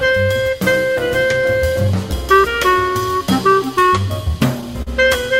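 Clock drift between sender and receiver runs through the whole clip. The sender's audio clock is roughly 4% slower than the receiver's, so the jitter buffer steadily drains and the receiver has to keep padding out the sound to stay in step.

Repeated timing corrections run from 0.02 to 4.30 s. The receiver repeatedly repeats short pieces, all in the same direction and unevenly spaced, adding around 150 ms in total at an effective 96% speed.

A short stall from a late packet follows at 4.82 to 4.89 s. A packet missed its playout time, the buffer ran empty, and the last sound was held for 44 ms until the packet arrived. Nothing is lost, but the sound hangs briefly with a slight buzz or dip.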